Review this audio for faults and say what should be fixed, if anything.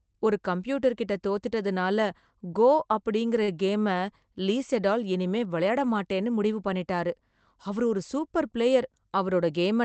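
A short stall from a late packet occurs at 3.43 to 3.50 s, just after "கோ அப்படிங்கற". The packet came late and the jitter buffer emptied. The last sound was stretched by 43 ms, then playback resumed. Nothing is lost. A modest jitter buffer margin would prevent it.

A jitter buffer speed-up runs from 9.06 to 9.52 s, after "அவர் ஒரு சூப்பர் பிளேயர்". Excess buffered audio was trimmed by cutting pitch-period pieces, about 40 ms in all. Speech plays at 108% speed, same pitch, and sounds hurried. Smoother packet delivery would prevent it.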